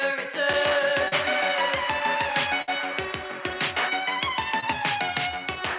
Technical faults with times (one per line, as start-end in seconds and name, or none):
1.08-1.14 short concealed packet loss
2.62-2.70 burst of packet loss
4.60-4.64 short concealed packet loss